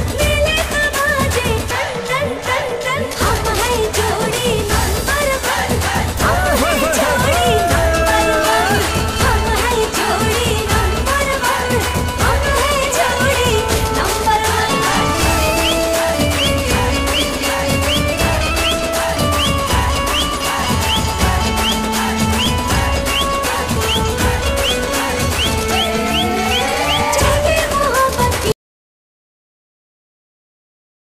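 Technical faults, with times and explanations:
28.52 s to the end, audio dropout to silence: the sound cuts off abruptly and never returns, leaving about 2.5 s of total silence with no room tone or noise floor underneath. The input was likely lost, through a disconnect, link failure or accidental mute, while the recorder kept writing silence. On a waveform the trace collapses to a flat line; a spectrogram shows every frequency band dropping to empty black at once.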